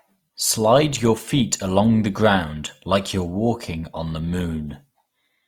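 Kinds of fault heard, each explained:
Opus compression: Throughout the speech there is plainly audible grainy, rough damage. It likely comes from Opus in its CELT music mode, which fills bit-starved bands with folded or noise-like content. This fits a low rate near 24 kbps, though the bandwidth stays full to 20.4 kHz.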